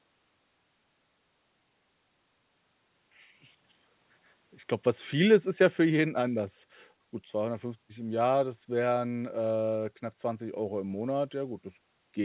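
There are no technical faults to describe in this speech, which comes through a call path with nothing above 4 kHz.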